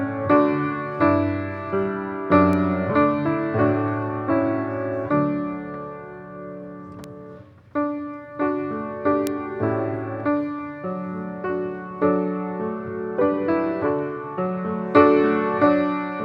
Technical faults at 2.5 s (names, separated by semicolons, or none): bit error spike